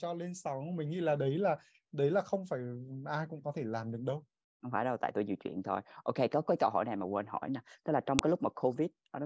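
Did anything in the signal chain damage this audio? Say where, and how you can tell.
Yes: at the storage stage, a WAV file header was played as audio when pieces were joined, giving a sharp, loud click at 8.19 s in the speech.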